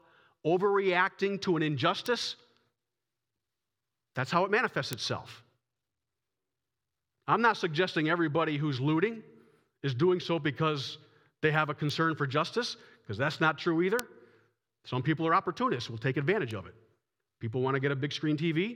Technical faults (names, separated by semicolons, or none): bit error spike